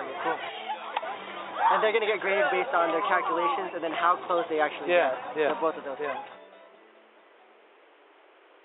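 Nothing goes wrong anywhere in this clip, so there's no fault to point to or time to mark.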